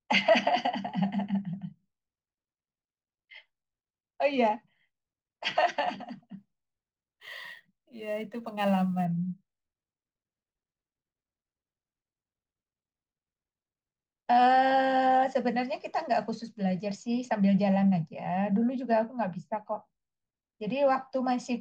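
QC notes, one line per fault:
6.38–9.05 s, sample clock jitter: a fine hiss and roughness rides on the speech, strongest on loud, high-frequency sounds and gone in pauses, sitting roughly 30 dB below the signal. An unsteady converter clock, wandering by several microseconds, mistimes each sample, and steeper waveforms turn that into more error. Unlike steady background noise, it tracks the signal's slope.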